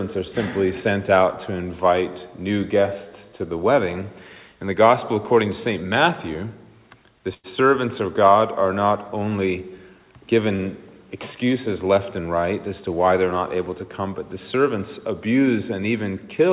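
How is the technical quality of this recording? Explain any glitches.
The recording has two brief glitches of one kind, heard through a telephone-band call path that has nothing above 4 kHz, which fits G.711 A-law coding.

Short stall from a late packet, at 7.34 to 7.47 s and again at 10.56 to 10.62 s. Each time a packet arrived late and the jitter buffer ran dry, so the receiver held the last sound for about 98 ms and then 31 ms before picking up where it left off. Nothing is lost, but the sound hangs unnaturally with a slight buzz or dip, and everything afterward runs that much later.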